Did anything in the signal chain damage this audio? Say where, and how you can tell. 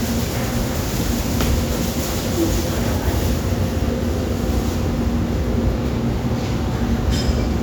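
No, nothing in the signal chain damaged this audio.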